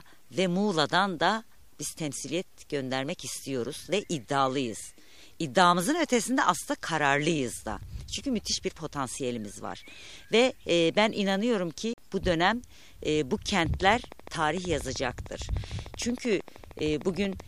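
At 11.93 s the sound cuts to silence for about 44 ms and resumes further along, a Bluetooth dropout, likely from roughly three wireless packets arriving too late. From 13.59 s to 17.41 s a steady train of clicks ticks about 13 times per second, some fifty pulses poking above the sound, likely from electrical interference or a struggling interface.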